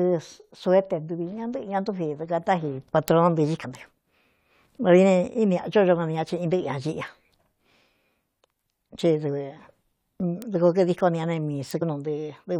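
At 3.08 s a bit error spike appears: a single flipped bit in a sample makes its value leap by a power of two and return, giving one sharp, broadband tick unrelated to the speech. The same tick recurs at 10.42 s, and at 11.71 s across two consecutive samples. At 3.64 s and again at 11.81 s there is damaged data in the compressed stream. Corrupted bytes cause the decoder to misread the frames there and lose sync while it searches for the next valid frame header. Each event is heard as a brief chirp or blip.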